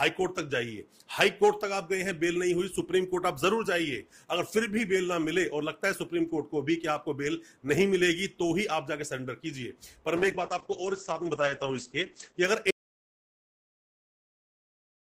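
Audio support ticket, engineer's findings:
Call bitrate drop, 10.21–12.50 s. Sound turns rough and muffled, top end cut from 20 kHz to 8 kHz. Encoder starved after bandwidth estimate fell; coarse coding fits a drop from about 32 kbps to 9 kbps, holding bottom roughly 2.2 s.

Audio dropout to silence, 12.71 s to end of clip. Sound cuts off mid-flow into silence, no room tone. Likely input lost (device disconnect, failed link or mute) while recorder kept writing silence. Content after 12.71 s unrecoverable.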